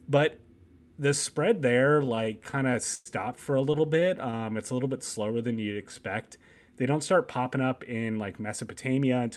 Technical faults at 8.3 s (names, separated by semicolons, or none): jitter buffer speed-up